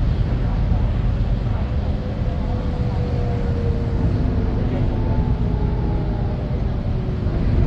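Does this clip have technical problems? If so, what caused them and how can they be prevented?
No, this clip has no technical problems, so there is nothing to trace back to a cause or prevent.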